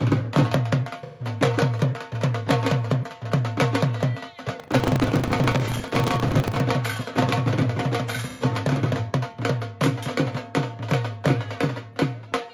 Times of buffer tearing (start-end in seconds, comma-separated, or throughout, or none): 4.56-6.64